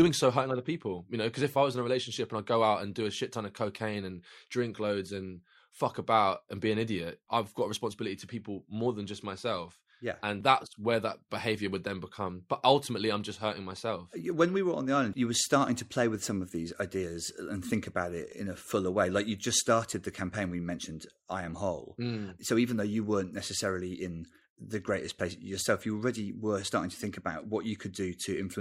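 No technical faults can be heard in this speech recording.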